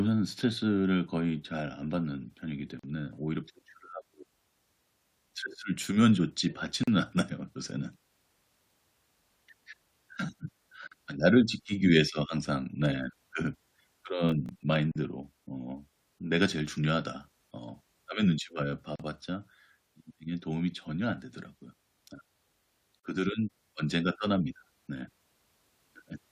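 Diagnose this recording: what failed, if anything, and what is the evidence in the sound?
Codec stage: a gap at a join of encoded pieces. Sound drops out for about 40 ms at 2.79, 6.84, 10.88, 14.92, 18.96 and 23.00 s, every 4 s. Untrimmed encoder delay and padding remain.

Driver or buffer stage: processor overload crackle from 14.29 to 14.76 s. Tiny buffers, near 1.5 ms, missed deadlines and fell to silence, causing gritty tearing.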